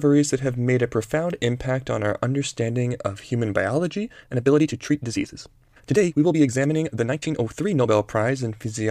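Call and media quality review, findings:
Time-stretched section, 4.06 to 7.92 s: pace jumps to about 1.51x while pitch stays put, so the audio sounds rushed. Likely a time-scale stage fitting audio to a length by dropping short segments. Spectrogram shows unchanged harmonic spacing with compressed syllable spacing and small splice discontinuities. Waveform shows tighter syllable envelopes.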